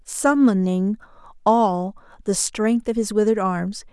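No technical faults are audible.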